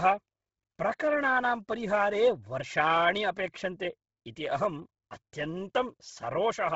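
Bluetooth LC3 compression runs from start to finish of this speech clip: the whole recording sounds heavily coded, with nothing above 7.7 kHz and a breathy, grainy edge on the voice. The likely cause is the LC3 transform codec at a very low rate, which fits about 16 kbps with 10 ms frames. Starved of bits, it discards much of the upper spectrum and fills those gaps with noise, so high detail turns hissy and rough.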